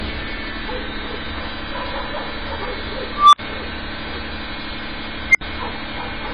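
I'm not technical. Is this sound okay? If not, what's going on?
No. Two separate problems can be heard.

The whole recording sounds dull and smeared, with a fizzy or warbling texture. Nothing is present above about 10.5 kHz, so the crisp top end is simply gone. This is most likely AAC compression, squeezed hard to make a small file. It differs from a simple muffled recording because the sound also swirls and fizzes instead of just losing brightness.

There are also two bursts from an unstable filter. At 3.12 s a beep around 1 kHz swells over about 0.21 s until it is very loud, then cuts to complete silence for 64 ms, ending at 3.39 s. At 5.29 s a higher beep around 2 kHz builds much faster, in about 0.05 s, and again drops into a 64 ms silence, ending at 5.41 s. A plain click or dropout would not grow louder first like this. The rising tone followed by a short gap is the clue.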